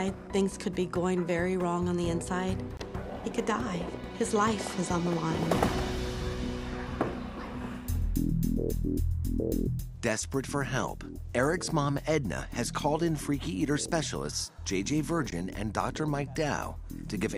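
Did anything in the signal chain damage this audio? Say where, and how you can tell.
Yes. Two brief dropouts to digital silence occur, one from 2.77 to 2.80 s lasting about 23 ms and a shorter one of about 15 ms at 15.31 s. The sound stops abruptly and resumes just as abruptly, with no fade at either edge. This points to the wireless transport stage, most likely a Bluetooth stall: interference delayed packets on the link, the receiving buffer emptied, and output stayed silent until the retransmitted packets arrived.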